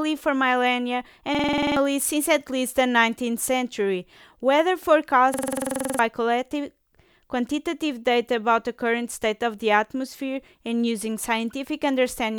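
A rapid machine-gun stutter breaks into the speech from 1.35 to 1.77 s and again from 5.34 to 5.99 s: a system hang loop. While the system froze, the hardware replayed one 46 ms buffer at 21.5 Hz, consistent with a 2048-sample buffer, and roughly 0.4 s and 0.7 s of speech were lost.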